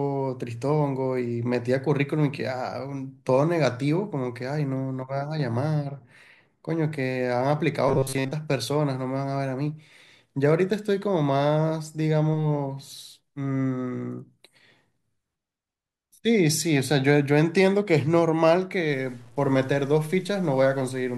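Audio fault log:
7.89–8.32 s, robotic sound from repeated short buffers: a rigid 134 Hz metallic buzz, likely from a roughly 7.5 ms buffer replayed over most of the span; unlike hum, it follows the speech only roughly.
18.91–21.18 s, low bit depth without dither: gritty grain around 35 dB below the speech, likely from 8-bit truncation; unlike steady hiss, it follows the signal and quiet moments sputter out.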